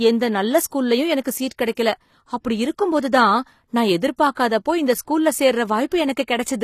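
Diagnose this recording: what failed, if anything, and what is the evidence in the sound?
Codec stage: sibilants sound gritty and lispy, with nothing above 14.9 kHz, likely HE-AAC compression near 24 kbps rebuilding the treble from copied lower bands.

Pre-echo, also at the codec: a short hiss runs 20 to 40 ms ahead of attacks at 1.22, 1.75 and 4.33 s, block quantisation noise spilling before each onset.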